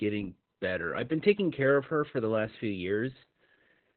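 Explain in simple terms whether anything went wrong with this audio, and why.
Yes, the whole speech clip has heavy Opus voice compression: the codec stripped everything above about 4.3 kHz, leaving it muffled, hoarse and a bit robotic.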